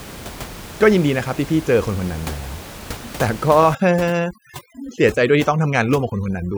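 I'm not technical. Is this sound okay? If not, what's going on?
No. Overdone noise removal starts at about 3.75 seconds and runs to the end of the clip. A cleanup tool meant to strip out background noise was set far too strong, so it turns single frequency bands of the sound far down or off whenever they look like noise to it. The quiet parts of the speech get thrown out too, with the gaps between words dropping to near silence dotted with twinkling specks. Before that point, the ordinary room noise sits quietly beneath the speech.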